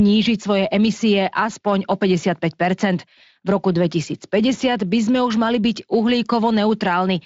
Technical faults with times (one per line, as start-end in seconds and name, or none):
none